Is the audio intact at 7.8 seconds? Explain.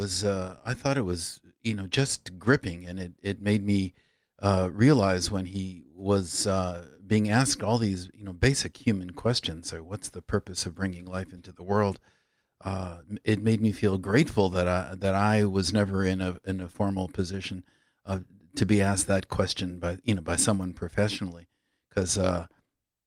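Yes, at 7.8 seconds the speech plays through intact, with no audible dropout, glitch or other fault at that moment.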